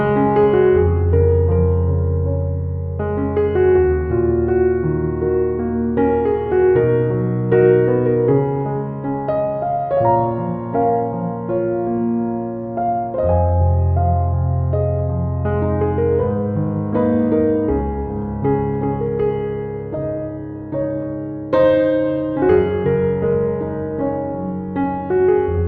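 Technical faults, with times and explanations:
No technical faults detected.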